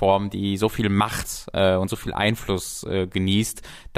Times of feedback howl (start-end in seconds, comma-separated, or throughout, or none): none